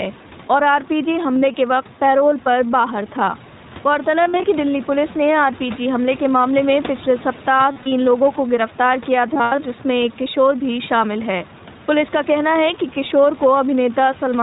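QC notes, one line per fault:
throughout, iLBC codec. The sound stops at 4 kHz, with nothing passing above it. The speech stays clear but has a rough, synthetic edge, and the codec damage is plainly audible. The codec codes each frame's excitation on its own, without leaning on the frame before. The sound points to the 15.2 kbps mode with 20 ms frames. Room noise sits about 20 dB below the speech and passes through the codec with it.
1.34–1.56 s, 4.24–4.45 s, 7.72–7.92 s and 9.34–9.60 s, lost iLBC frames. About 80, 120, 140 and 160 ms of audio go missing, spread across windows of 0.2 to 0.24 s. The longest unbroken gap is about a tenth of a second, in the last window. The others are shorter. The decoder repeats the last pitch cycle mixed with noise, so each gap sounds like a held, buzzy or breathy vowel. The frames stand alone, so the speech is right again almost at once.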